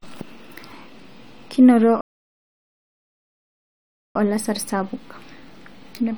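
At 2.01 s the speech halts in a rebuffering stall. The player ran out of downloaded audio and waited for more, leaving silence until 4.15 s. Unlike a dropout, nothing is skipped: the speech resumes exactly where it stopped, with 2.1 s added.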